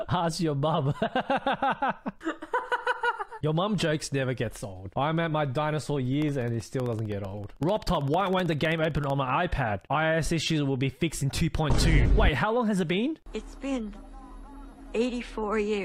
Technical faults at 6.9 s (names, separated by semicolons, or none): periodic USB or driver dropouts